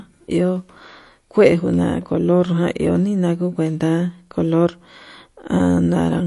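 Throughout this speech clip the sound is watery and swirly, with nothing above 11.3 kHz and smeared attacks. The likely cause is MP3 compression at a low bitrate, consistent with roughly 48 kbps, where the encoder cuts the treble and lets weak frequency lines flicker between frames.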